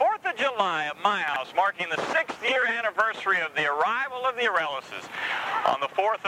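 The audio has chunks out of order between 1.28 and 1.36 s. One 20 ms chunk plays three chunks late, after the material that should follow it, so that 80 ms span comes out briefly jumbled, with three hard joins. It differs from a dropout or a stutter because nothing is missing and nothing repeats. All the sound is present, just shuffled, which points to a late-arriving or misordered buffer write.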